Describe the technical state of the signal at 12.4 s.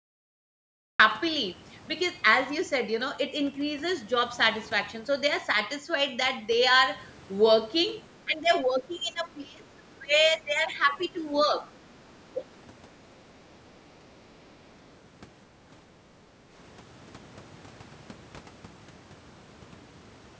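At 12.4 s the speech dips. The drop runs from 12.33 to 12.49 s, roughly 150 ms in all. At its deepest the level falls by about 10 dB, then recovers. The likely cause is speech suppressed in double talk. The far side was talking at the same moment. The echo canceller could not tell this talker from the loudspeaker echo, so it turned both down. The dip sits within audio that ends at 8 kHz.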